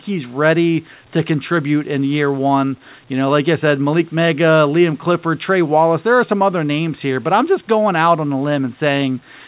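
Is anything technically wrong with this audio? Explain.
No, nothing is technically wrong with this speech recording. It has passed through a working WebRTC call path, and the G.711 A-law coding holds it to a telephone band with nothing above 4 kHz.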